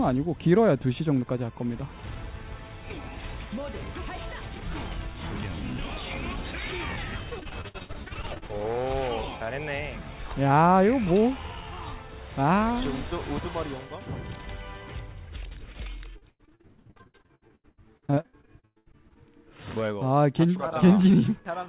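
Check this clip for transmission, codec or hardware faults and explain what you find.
Yes, there is one kind of transmission fault, occurring twice, heard through a narrowband call path with nothing above 4 kHz.

Repeated packet loss (robotic sound), 7.3 to 8.51 s and 16.17 to 19.18 s: packets kept going missing, and each hole was bridged by extending the preceding sound. The result is choppy audio with pieces missing, with roughly a third to half of each stretch concealed and holes up to 64 ms and 108 ms long.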